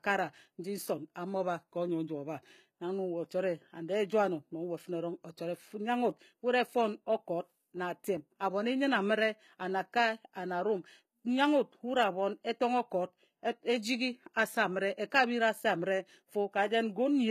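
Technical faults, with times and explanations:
Throughout, HE-AAC compression: the speech has a bright but artificial top end, with s sounds turned gritty, lispy and metallic, and the treble not quite tracking the lower voice. This is likely the work of the HE-AAC codec at a very low rate, which fits about 20 kbps. Only the lower band is truly coded, and the highs are rebuilt by copying lower bands upward under a coarse envelope, so their harmonics no longer line up across the crossover.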